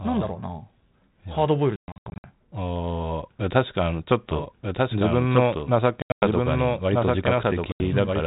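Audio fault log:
1.76–2.29 s, 6.02–6.23 s, 7.72–7.81 s, packet loss on an ADPCM call: the first burst loses 340 ms in holes scattered over 480 ms, the longest 120 ms; the second loses 180 ms over 200 ms, the longest 100 ms; the third loses 80 ms. Each hole cuts to hard-edged silence. Afterwards the speech returns with brief, slight distortion, because the receiving decoder's adaptive predictor and step size have drifted from the sender's. That stumble, settling over some tens of milliseconds, is what separates this from a clean dropout. The 32 kbit/s G.726 path between the gaps stays band-limited below 4 kHz.
4.31 s to the end, doubled audio track: a second full-band copy of the speech runs about 1.5 s behind the original at roughly 5 dB lower. It likely comes from a slower second capture path or an edit that left two copies out of step. It differs from a room echo or a feedback echo because it repeats only once, has no decay or reverberant colour, and cuts in abruptly at 4.31 s.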